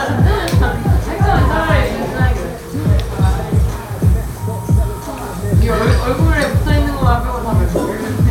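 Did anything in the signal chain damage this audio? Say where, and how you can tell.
No, nothing in the signal chain has damaged this recording of sounds. I can't hear any mark left at any stage, from capture through to playback.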